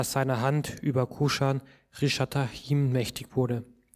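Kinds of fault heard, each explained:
Nothing stood out on listening; no fault of any kind could be heard.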